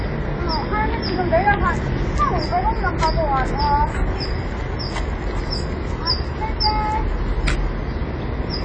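Throughout the clip, the audio has likely been encoded with AAC compression at a low bitrate, plainly audible and consistent with about 24 kbps AAC-LC. The encoder has dropped everything above 9.7 kHz and thinned the spectrum, so the sound is dull and smeared, with a warbling, fizzy texture.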